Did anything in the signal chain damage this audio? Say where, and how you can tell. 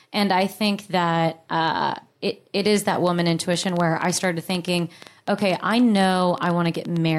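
Yes. From 2.68 s to 6.97 s, just after "that uh it it", a train of clicks ticks over the speech and its pauses, about eight per second at an uneven pace, peaking a few dB above the signal. That points likely to interference coupling into the analogue wiring.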